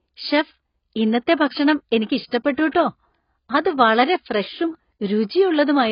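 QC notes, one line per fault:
throughout: AAC compression, heavy. The speech sounds dull and smeared, with a watery, warbling texture on held vowels and fizzy, blurred sibilants. This is likely a low-bitrate AAC-LC encode, and the damage level fits a rate around 16 kbps. To save bits, the encoder drops everything above 5.1 kHz and quantises the remaining bands coarsely, so detail collapses. On a spectrogram, a hard horizontal ceiling sits at 5.1 kHz, with patchy holes and blocky gaps in the upper bands below it.
2.71–2.75 s: pre-echo. A short hiss rises just before a sharp onset, and the attack itself sounds softened rather than crisp. The transform codec spreads quantisation noise across its whole block. Because the transient lands late in that block, noise sized for the loud attack also fills the quiet gap ahead of it, smearing about 37 ms backward in time. On the waveform, low-level fuzz creeps in before the onset. 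A spectrogram shows a broadband haze leading the attack.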